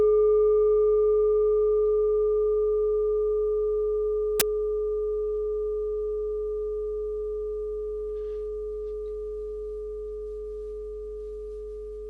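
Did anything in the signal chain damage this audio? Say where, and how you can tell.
Yes. At 4.40 s there is a very brief burst of very loud white noise with hard edges, cutting in and out abruptly. These are file tags played as audio, a storage or playback fault: the compressed data of an embedded cover picture was read as if it were samples.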